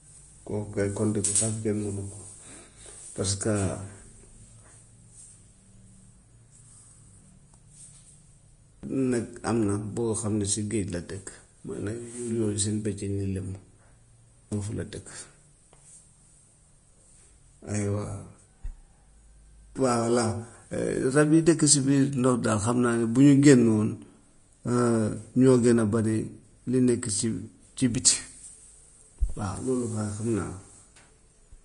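Vorbis compression runs throughout the speech, with nothing above 10.5 kHz. The encoder has likely quantised the treble so coarsely that fine detail turns into grainy hiss, roughening tones and blurring consonant attacks, which fits a low bitrate near 33 kbps.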